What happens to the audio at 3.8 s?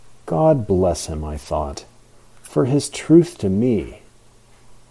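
Nothing goes wrong at 3.8 s; the speech there is intact, with no dropout, click, distortion or other fault at that moment.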